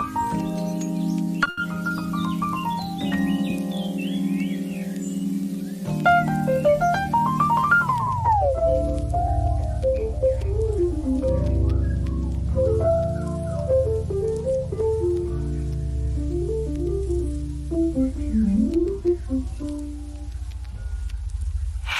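At 1.43 s and again at 1.49 s, short stalls from late packets hold the sound for 20 ms and then 80 ms, visible as smeared, flattened spectrogram frames. From 18.86 to 19.87 s, a jitter buffer speed-up runs the audio at 107% speed with pitch unchanged. Around 70 ms of pitch-period slices are cut, leaving a slightly compressed waveform.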